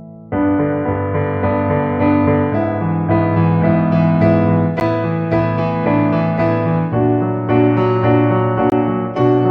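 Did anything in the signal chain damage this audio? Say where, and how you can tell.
Yes, twice, at the driver or buffer stage. The music drops to a block of digital silence at 4.8 s for 10 ms, and again from 8.70 to 8.72 s for 20 ms. Each gap starts and ends abruptly with no fade, which is typical of an output buffer not filled in time. Unlike a network dropout, nothing smooths over the hole, and unlike a single click, the longer gap leaves the sound fully absent for its length.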